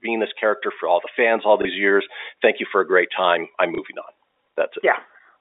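From about 0.05 to 2.14 s there's automatic gain rising: the gain control judged the input too quiet and pushed it up about 4 dB, so the speech and background swell together. At 1.62 s a 30 ms gap is covered by packet loss with last packet repeated, which fits a single lost packet being replayed, and it comes across as a small blip. The same thing happens at 3.75 s, right after "a great time I'm", again lasting 30 ms. All of it sits on top of the G.711 telephone coding, which keeps the audio inside roughly 300 to 3700 Hz.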